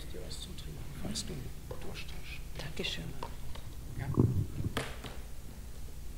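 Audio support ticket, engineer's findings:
No faults found on listening; no symptoms to attribute to any component.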